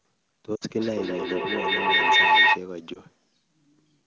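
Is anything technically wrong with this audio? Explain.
Yes. Two kinds of fault are audible.

From 0.56 to 0.64 s, and again briefly from 2.93 to 3.00 s, the speech smears and dips out. These are lost AMR speech frames: the decoder stretches the last good frame with falling gain over a gap of about 60 ms, then about 20 ms.

From 0.78 to 2.65 s, the speech comes round again roughly every fifth of a second, thin and ringing, peaking about 12 dB above the direct speech. This is feedback echo between two devices: one device replays the other's microphone, and that microphone picks the playback up again.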